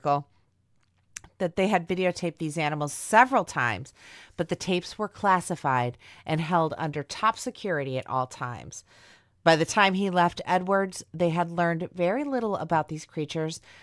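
No faults found anywhere in the speech recording.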